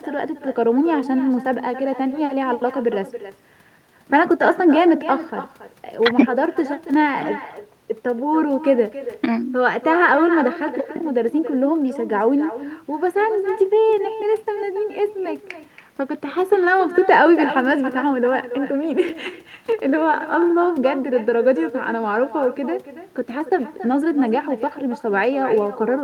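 From start to finish, the speech carries echo with no canceller. The far end plays it through a loudspeaker, and its microphone sends it back unremoved. Each phrase returns about a third of a second later, about 13 dB quieter and thinner.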